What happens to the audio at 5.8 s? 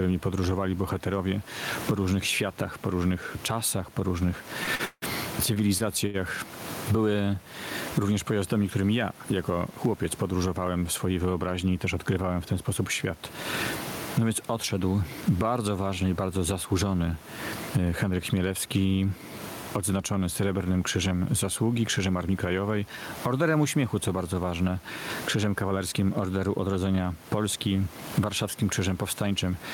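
At 5.8 s the audio sits inside a run of repeated stalls (stutter) lasting from about 4.63 s to 6.16 s. Packets reached the receiver late, or more slowly than they were played out, so its jitter buffer ran dry six times in that stretch. Each time, the receiver kept the last sound going until fresh audio arrived, fading it during the longer waits. The filler adds up to about 366 ms, with the longest single stall at 168 ms, roughly a quarter of the span. Nothing is lost, but the sound drags and hiccups.

Gain pumping is also present at this moment, as it is through the whole clip. The input gain was likely set far too high for the microphone, so a fast limiter or compressor clamps down on every loud syllable, with the level swinging by around 20 dB. The room noise is normally about 30 dB below the speech. Loud and quiet passages are squeezed toward the same level, leaving the speech squashed.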